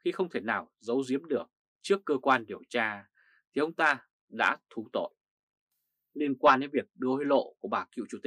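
Nothing in the audio stood out as a technical problem on listening.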